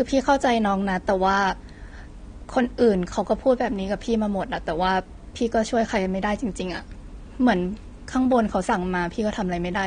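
Speech runs through the whole clip with plainly audible AAC compression. The top end sounds dull and cut off. Sibilants come out fizzy and smeared. Sustained sounds carry a warbling texture. The damage is steady from start to finish. The likely cause is an AAC-LC encode at a low bitrate, which fits about 32 kbps. At that rate the encoder drops high frequencies and coarsely quantises the remaining bands.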